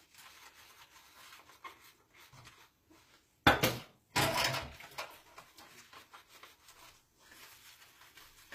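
HE-AAC compression runs throughout: the lower spectrum is coded directly, while the treble is likely rebuilt by copying lower bands upward, which fits a bitrate around 24 kbps. The copied highs sound gritty and metallic, with nothing above 15.5 kHz.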